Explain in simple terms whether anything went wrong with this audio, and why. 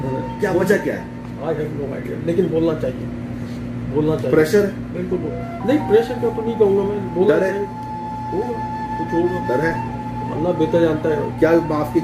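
Nothing went wrong here.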